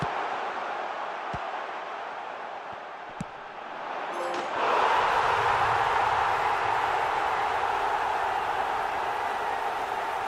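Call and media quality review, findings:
Nothing stood out on listening, and no findings were raised for this clip.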